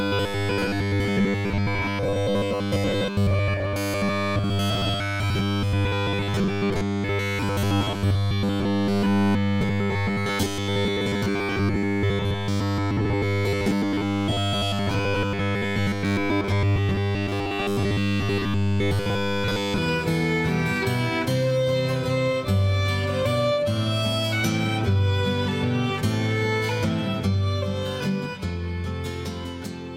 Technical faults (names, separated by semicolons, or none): robotic sound from repeated short buffers